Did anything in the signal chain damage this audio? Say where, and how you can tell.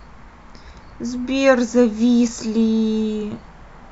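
No, nothing along the chain seems to have done any harm here; I can't point to a single moment where this speech gets knocked about.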